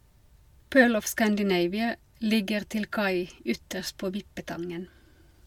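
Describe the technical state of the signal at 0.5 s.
Nothing is wrong at 0.5 s; the speech signal there is intact, with no dropout, clipping, glitch or other fault to be heard.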